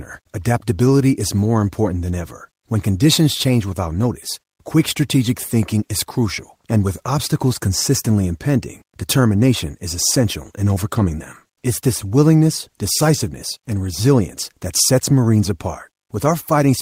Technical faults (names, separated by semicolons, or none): none